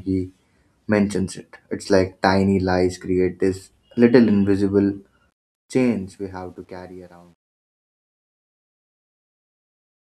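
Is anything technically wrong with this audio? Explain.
Yes. From 5.30 s to the end at 10.10 s there's truncation distortion on a fade. The speech fades out smoothly from about 5.3 seconds, but the fade is rounded to too few levels without dither, which fits a 10-bit stage. The tail turns grainy, and from 6.64 s it is at its grittiest.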